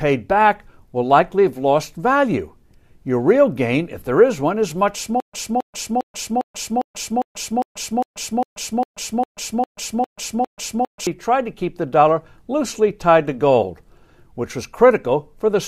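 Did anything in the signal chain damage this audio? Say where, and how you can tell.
Yes, there's a stutter with silent gaps from about 5.2 s to 11.07 s, and it sounds like the playback or streaming stage. The speech locks onto one 270 ms fragment and replays it 14 times, each pass followed by about 133 ms of dead digital silence, so it pulses every 403 ms like clockwork. That's most likely a stalled player retrying, re-serving its last buffered chunk and then running dry. Whatever should have played there is simply gone.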